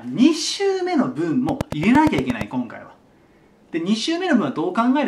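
A train of clicks runs from 1.49 to 2.42 s: about ten matching pulses at a regular 8.65 per second, some 15 dB above the sound. Likely interference from nearby equipment or a faulty connection or power supply, it sounds like steady ticking.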